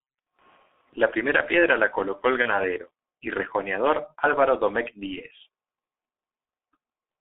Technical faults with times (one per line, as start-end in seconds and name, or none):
0.00-7.21 G.723.1 codec
2.42-2.53 VoIP packet loss concealed by the speech codec